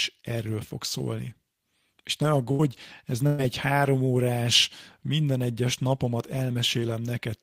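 Bursts of packet loss hit this speech clip at 2.51 to 2.62 s and again at 3.27 to 3.41 s. Each time, a run of audio never arrived in time, so the receiver stretched the last sound it had and faded it out, bridging about 74 ms and then 116 ms. Speech picks up again past the hole, with roughly 80 ms and 120 ms of the original simply gone.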